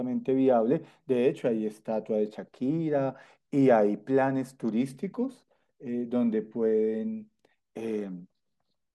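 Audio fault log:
No faults: the speech signal holds steady, with no technical problems audible anywhere in the recording.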